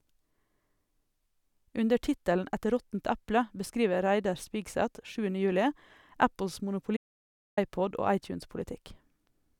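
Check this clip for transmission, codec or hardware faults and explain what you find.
One fault turns up: an audio dropout to silence from 6.97 s to 7.57 s. The input signal was likely lost briefly, through a disconnected device, a failed link or an accidental mute, while the recorder kept writing silence. The speech cuts off abruptly mid-flow and returns just as suddenly about 0.61 s later. The gap is dead silence with no room tone at all, and whatever was said during it is gone.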